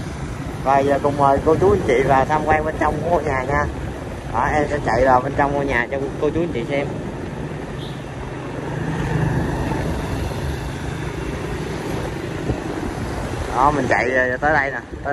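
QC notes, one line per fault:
No technical faults are audible anywhere in the signal.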